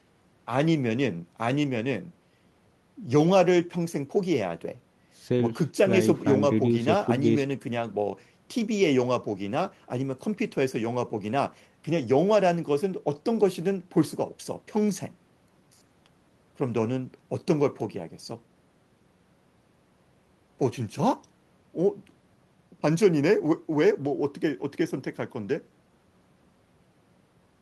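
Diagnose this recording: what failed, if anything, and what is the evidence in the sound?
Listening through this speech recording, nothing stands out as a failure at any stage of the chain.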